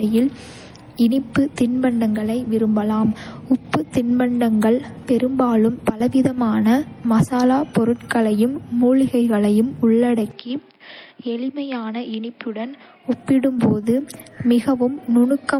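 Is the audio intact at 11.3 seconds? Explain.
No. From 10.31 to 13.05 s the input was likely switched to a poorer device, with no gap at the change. The band stops at 5.3 kHz, so the sound turns dull and boxy, drops roughly 10 dB, and gains a new noise floor well below the signal. On a spectrogram the top abruptly goes blank above 5.3 kHz; the waveform shrinks.

Throughout, including here, the mixed artefacts heard together point to transcoding between lossy codecs, likely MP3 then HE-AAC at rates fitting 48 kbit/s. Each stage adds artefacts over the last. A spectrogram shows blotchy, patchy high bands, up to a 20.3 kHz cut-off outside this span.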